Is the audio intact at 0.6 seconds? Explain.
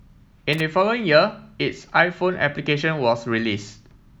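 No, loose connector crackle runs from 0.53 to 0.60 s, ending right at that moment. A worn or dirty contact was intermittently breaking the speech signal, chopping it, so it comes through as a brief, irregular scratchy burst.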